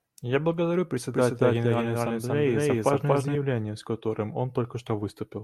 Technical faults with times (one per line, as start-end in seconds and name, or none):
1.13-3.35 doubled audio track